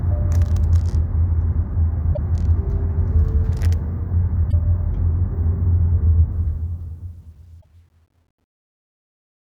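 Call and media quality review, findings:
Damaged data in a compressed stream at 2.13–2.18 s, 4.48–4.54 s and 7.59–7.65 s: short chirps, clicks or holes as the decoder loses frame sync. Spectrogram shows brief broadband smears and waveform discontinuities.

Truncation distortion on a fade from 6.32 s to the end, worst from 7.36 s: the fade-out starting around 6.3 s goes gritty. A 10-bit gain stage without dither leaves a stepped, square-ish waveform and a harmonic haze on the spectrogram.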